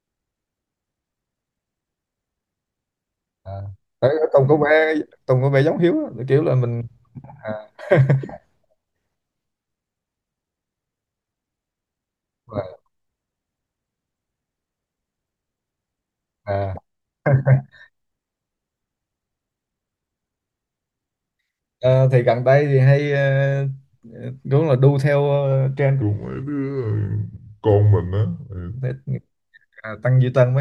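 Near the end, from 26.02 to 28.75 s, there's a section at the wrong speed: the speech drops to about 0.78 times normal, so it drags and sits about four semitones lower. It's likely been played back against the wrong clock for that stretch.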